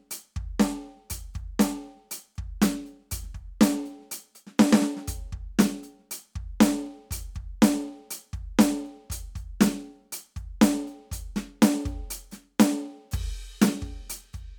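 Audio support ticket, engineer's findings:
No audible faults found.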